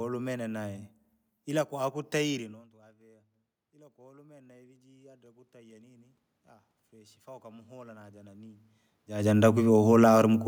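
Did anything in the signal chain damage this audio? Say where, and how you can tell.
Yes: automatic gain rising, in the call processing stage. After "ila kwatutayire", from 2.71 s to 10.38 s, the input level falls by about 24 dB and the AGC slowly raises gain by about 16 dB. Room noise swells with the voice, which a talker simply moving closer would not cause.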